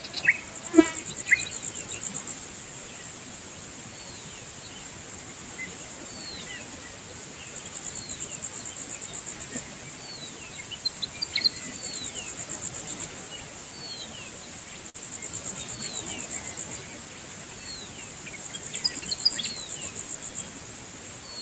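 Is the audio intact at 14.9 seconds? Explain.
No. A burst of packet loss hits from 14.89 to 14.99 s: the receiver stretches the last sound for about 47 ms as a fading hiss, then skips about 40 ms. The music noise suppressor is also active there, turning sustained sound down by roughly 5 dB.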